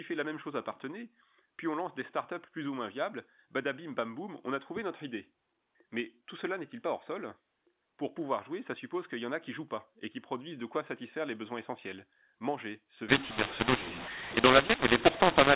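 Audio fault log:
13.09–15.55 s, mu-law and A-law mixed up: A-law telephone samples get decoded as mu-law, scrambling levels, so speech turns harsh and distorted and pauses fill with noise.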